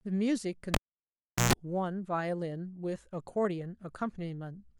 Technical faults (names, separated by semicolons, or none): cable pulled and plugged in